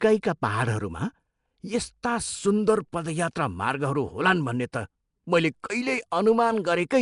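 A block-based codec, likely Nellymoser Asao, has coded the speech with a fixed, coarse bit budget, which fits a rate around 44 kbps. Weak bands are filled with noise and nothing survives above 10.6 kHz, leaving a rough, hissy halo and a smeared, underwater tone throughout.

At 4.72 s, right after "पदयात्रा मार्गहरू होलान् भन्ने", and again at 5.63 s, the codec spreads noise meant for a sharp attack back into the quiet moment before it. This pre-echo is a brief hiss, about 11 ms and 10 ms long, that softens each onset.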